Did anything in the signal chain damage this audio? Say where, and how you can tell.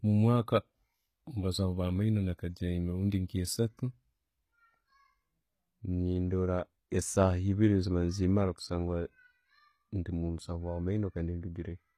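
Yes. Throughout the speech the treble stays bright but sounds synthetic, with gritty, metallic, lispy s sounds. That points to the codec stage, likely HE-AAC compression at a low bitrate near 20 kbps. Band replication copies lower bands upward, so harmonics misalign above the crossover. A plain low-pass would leave the top dull instead.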